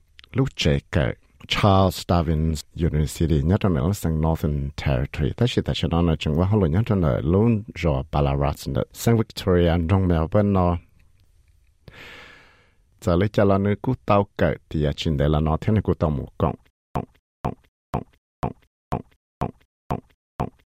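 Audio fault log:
16.70 to 20.78 s, stutter with silent gaps: through to the end, the same 0.24 s burst repeats eight times, each followed by 0.25 s of digital silence, a steady beat every 0.49 s. Likely a stalled stream replaying its last fragment per retry, so the real audio there is lost.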